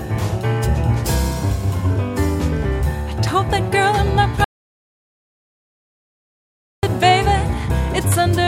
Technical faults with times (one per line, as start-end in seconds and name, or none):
4.44-6.83 audio dropout to silence